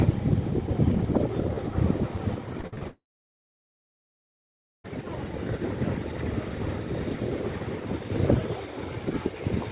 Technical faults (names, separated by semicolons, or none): repeated packet loss (robotic sound); long network dropout